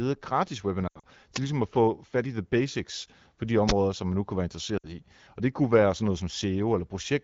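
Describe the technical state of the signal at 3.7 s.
At 3.69 s there is an uninitialised buffer fault. A block of about 12 ms was sent to the output before any audio had been written into it. Whatever stale memory it held was played as if it were samples. The result is a brief, loud crack. Its length fits a 512-sample buffer. The light coloration of the AMR wideband (HD Voice) codec continues through this moment.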